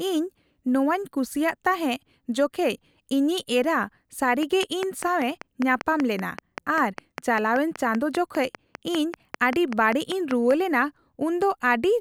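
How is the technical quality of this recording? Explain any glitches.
The recording has one clear fault, a train of clicks. From 4.43 to 10.52 s, likely interference or a faulty connection injects about thirty regular pulses, 5.1 per second, ticking roughly 10 dB above the speech, pauses included.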